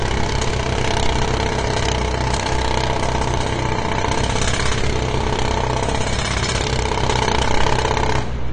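A recording of sounds, marked by AAC compression artefacts from start to finish. The high frequencies are cut off, so the top end sounds dull. The damage is plainly audible, with smeared detail. It fits a likely low-bitrate AAC-LC encode near 32 kbps.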